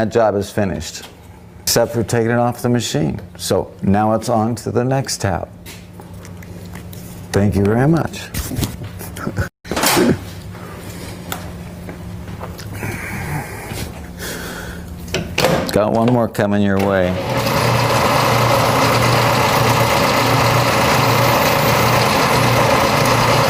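From 6.92 s to 14.92 s the audio shifts abruptly into a lower-quality state, then returns just as abruptly: an adaptive stream at a lower bitrate. The connection slowed, so the player switched to a leaner encoding, which fits a step down from Opus at about 64 kbit/s to about 24 kbit/s, and codec artefacts rise for those eight seconds. Unlike packet loss or a dropout, there is no gap, and unlike a uniformly low-bitrate file, quality is normal on both sides.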